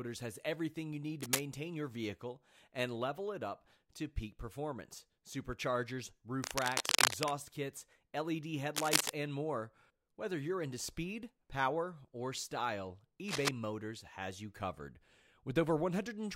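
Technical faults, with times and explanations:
1.20–1.44 s, 6.44–7.31 s, 8.76–9.11 s and 13.28–13.49 s, cable scratch noise: harsh, uneven scratching bursts sit over the speech, about as loud as it after "has everything you need" and at 13.28 s, and somewhat louder after "to peak performance superchargers" and before "and more". A worn cable or connector being moved, its contact resistance flickering, is the likely cause.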